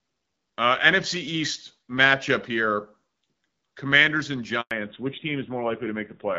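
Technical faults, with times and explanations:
4.61 to 4.71 s, handover gap: the speech cuts out for 100 ms as the network switch passes no frames, true silence rather than a dropout with filler noise.
4.71 to 6.39 s, fallback to narrowband: everything above 4 kHz disappears for good, so speech turns duller and rougher, pointing to a drop from about 12.65 kbit/s HD Voice to a narrowband codec near 7.4 kbit/s.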